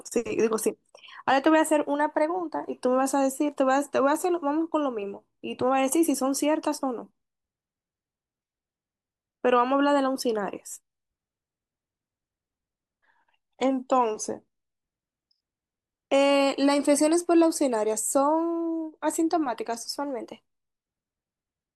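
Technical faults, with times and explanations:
13.08–14.75 s, drift correction step: the speech suddenly slows by about 6% and drops around 111 cents, a bit over a semitone, for roughly 1.7 s, then snaps back to normal. That pattern likely comes from clock-matching software briefly changing the playback rate in one step to keep its buffer level.
19.98–20.85 s, drift correction step: the reverse happens here. The speech speeds up about 6% and rises around 104 cents for under a second before snapping back.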